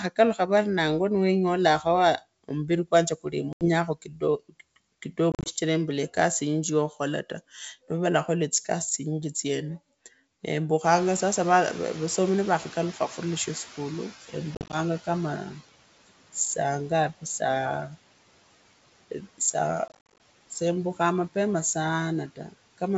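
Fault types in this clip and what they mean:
noise suppressor artifacts: The suppressor pulls down bands it judges to be steady noise, cutting the background by about 17 dB, so it sinks between phrases and rises beneath the speech.
packet loss on an ADPCM call: Lost packets become abrupt silent gaps totalling 80 to 200 ms per event, and the decoder's predictor falls out of step, so the speech resumes with brief distortion.
speech cut by the noise suppressor: Between 3.87 and 4.23 s the suppressor treats part of the speech as noise and lowers it by up to about 14 dB, so it sounds swallowed and faint.
noise suppressor catching up: Room noise jumps about 24 dB near 11 s, and the suppressor's estimate lags, letting the noise through at first and then reducing it by about 10 dB over roughly 3.3 s.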